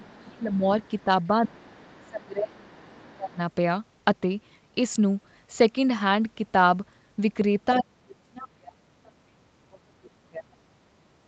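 From 0.00 to 0.64 s the speech is suppressed in double talk, dipping by about 25 dB. The echo canceller likely ducked the talker while the other side spoke, which shows as a sagging waveform envelope.

From 0.02 to 1.04 s the other side's voice leaks through, about 30 dB below the speech. It is likely residual loudspeaker echo and appears on a spectrogram as faint harmonics under the main voice.

The pattern repeats with leakage at 1.46–2.25 s and 2.56–3.37 s, and suppression at 1.48–1.70 s and 2.05–3.40 s.

The deepest suppression comes from 7.81 to 10.52 s, dropping about 35 dB. On the waveform it looks like a near-gap.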